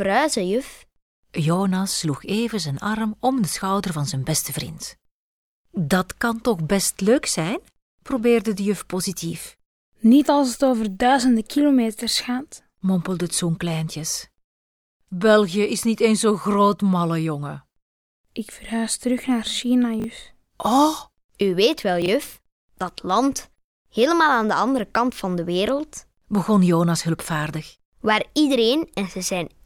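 Chunks out of order at 20.0 s and 22.02 s: a 20 ms chunk plays one slot late, then two slots late, giving a brief jumbled stutter at the hard joins.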